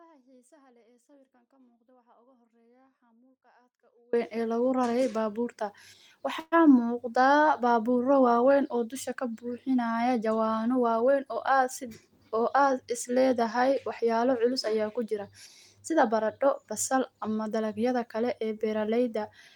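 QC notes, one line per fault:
0.00–4.13 s, audio dropout to a faint residue: the signal path, likely broken, leaves only faint sound about 35 dB down until speech returns abruptly at "ee lagu rarey baabuurta".
6.39–6.54 s, call audio freeze: delayed packets drained the jitter buffer, so about 125 ms of stretched buzz is inserted, ending with 20 ms of silence; nothing is lost, likely.
11.01–12.87 s, jitter buffer speed-up: the receiver trimmed short pitch-period pieces, about 150 ms in total, so speech runs at 107% speed, hurried at unchanged pitch.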